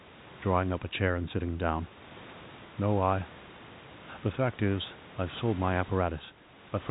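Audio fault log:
No system fault can be heard: the speech carries the expected G.711 telephone coding, with nothing above 4 kHz and a sound consistent with a 64 kbps mu-law stream, and the room's own background noise sits about 23 dB below the voice.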